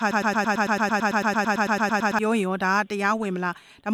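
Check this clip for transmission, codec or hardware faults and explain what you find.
One fault is present: a broken-record loop. It is already under way when the clip opens and runs to 2.19 s. A 111 ms fragment repeats exactly, back to back, about 19 times. The likely cause is a stalled player, encoder or stream resending its last buffer. The audio that belonged there is lost.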